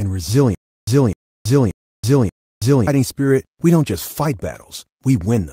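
Stutter with silent gaps from 0.55 to 2.87 s in this speech: a 255 ms fragment plays four times, each followed by about 326 ms of dead silence, repeating every 581 ms until "spirit we don't just". Likely a stalled stream replaying its last buffer, with the intervening audio lost.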